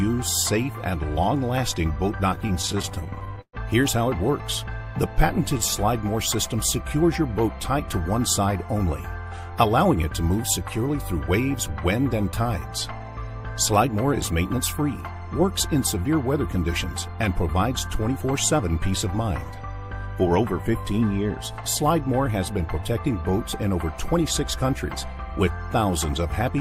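From 2.35 to 3.55 s, repeated stalls (stutter) occur. The jitter buffer ran dry 19 times and the last sound was stretched to fill each gap, the longest 121 ms. The audio drags and stutters. On a waveform the gaps show as repeated or fading segments, and on a spectrogram as smeared, held stretches.

Jitter buffer speed-up follows at 5.87 to 7.41 s (104%), 9.55 to 9.97 s (107%), 13.77 to 14.83 s (105%) and 17.27 to 19.21 s (105%). Each time the buffer trimmed roughly 40 to 100 milliseconds of excess delay by cutting out pitch periods. The sound runs faster at the same pitch, and the spectrogram shows slightly compressed timing with no shift in frequency.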